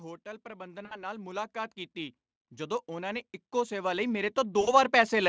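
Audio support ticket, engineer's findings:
Automatic gain rising, 0.43 to 5.24 s. Level and room noise swell together, about 18 dB overall. Probable component: capture-side AGC. Input read as too quiet, so gain was stepped up slowly. Nearly the whole clip affected. Noise floor climbs with the talker.

VoIP packet loss concealed by the speech codec, 0.85 to 1.03 s. About 60 ms of audio missing, consistent with three 20 ms frames. Decoder stretches the last pitch and spectral shape. Result: stretched, fading sound. Weak, smeared sound persists after packets resume.

Same fault again, 4.61 to 4.74 s. Again about 60 ms lost. Same decaying fill. Same slow recovery. Probable component: network path feeding the Speex decoder, wideband mode, nothing above 8 kHz.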